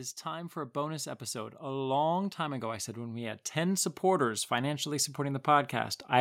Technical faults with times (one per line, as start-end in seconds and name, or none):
0.22-6.01 automatic gain rising